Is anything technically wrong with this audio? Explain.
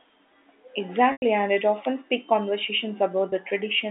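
Yes, there are two dropouts concealed by packet loss with pitch repetition. From 1.12 to 1.22 s, just before "and it often speaks", the speech turns into a held, buzzy tone that fades toward silence before the talker returns through a brief cross-fade. From 3.30 to 3.32 s, right after "it often speaks conversations", a shorter 20 ms gap sounds like a slightly held, buzzy note. In both places the receiver lost audio and filled the hole by repeating the last pitch period, fading it out. The 100 ms gap fits five lost 20 ms packets, and the 20 ms gap fits one. All of this sits within the narrow telephone band of the G.711 line.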